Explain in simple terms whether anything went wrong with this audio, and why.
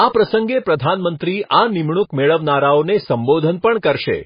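A couple of things went wrong. Throughout, the speech sounds dull and watery, with nothing above about 5 kHz, so the crisp top end is gone. That's likely heavy MP3 compression: squeezed for space, the encoder chopped off the treble and dropped quieter details.

There's also pre-echo, a short hiss sneaking in just before sharp sounds, at 1.19 s, 3.59 to 3.64 s and 3.81 to 3.83 s. The codec smeared its noise across a short chunk of audio, so it leaks ahead of each attack, softening it.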